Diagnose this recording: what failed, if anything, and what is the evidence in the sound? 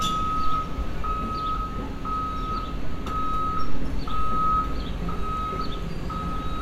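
Listening closely to these everyday sounds, nothing stood out that would point to a failure at any stage of the chain.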